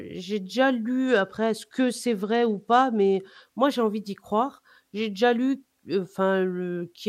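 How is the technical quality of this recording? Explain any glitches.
From about 1.07 s to 3.45 s the speech turns dull and gritty, then clears. This is a Bluetooth SBC bit pool drop: under link congestion the encoder cut the bits it spends per frame, leaving the upper sub-bands starved and the rest coarsely quantised. The depth of the change fits a bit pool falling from 28 to 13, around 102 kbps. Unlike a dropout, the sound never stops, and unlike a plain low-pass filter, granular noise rides along with the lost treble.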